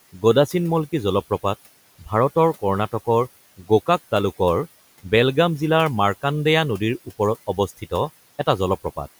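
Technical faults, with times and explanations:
7.47–7.92 s, speech cut by the noise suppressor: quiet parts of the speech were mistaken for background and pulled down by up to about 14 dB, roughly a tenth of a second in total, so they sound swallowed. The waveform envelope dips and the spectrogram thins to patchy energy.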